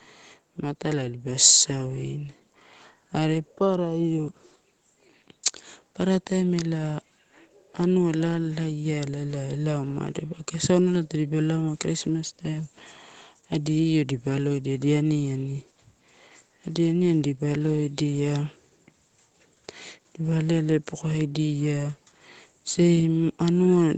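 From 1.04 s to 21.45 s, automatic gain rising slowly lifts the level by about 5 dB as the gain control judges the input too quiet. Voice and background noise swell together, unlike a talker moving closer, where only the voice grows.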